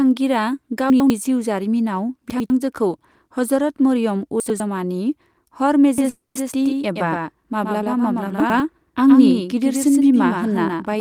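Chunks out of order occur at 0.9 to 1.1 s, just before "जिउ जारिमिनाव", again at 2.3 to 2.5 s, right after "जिउ जारिमिनाव", and at 4.4 to 4.6 s, after "हजरत मरियम". Each time a 100 ms piece of the speech was written one chunk late, so it plays after the piece that should follow it. Nothing is lost, but each 200 ms stretch sounds briefly jumbled, with hard joins where the pieces meet.

A doubled audio track begins abruptly at 5.98 s and runs to the end. A second full-band copy of the speech trails roughly 100 ms behind, about 5 dB quieter. It has no decay and no room colour, which gives a hard, slapback-like doubling rather than a natural echo. The likely cause is the same signal being captured again through a slower path.

A call audio freeze follows at 6.09 to 6.37 s. The last sound is held as a fading buzz for 260 ms, including about 160 ms of near-silence, and then the speech resumes where it left off. 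Nothing is missing, but everything afterward arrives 260 ms late. The likely cause is packets stalling in transit while the jitter buffer ran dry.

Chunks out of order return at 8.4 to 8.6 s. Again a 100 ms chunk plays one position late, producing the same brief scrambled moment.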